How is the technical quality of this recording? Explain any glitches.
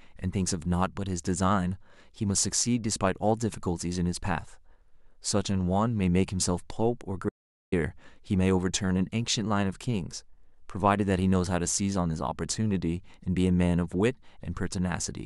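One glitch stands out. From 7.29 to 7.72 s, an audio dropout to silence: input was likely lost while recording continued, so 0.43 s of speech becomes silence without room tone.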